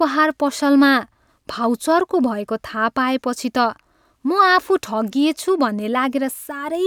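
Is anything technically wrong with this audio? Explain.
No, nothing technically wrong stands out in this speech recording; it all sounds just as it should.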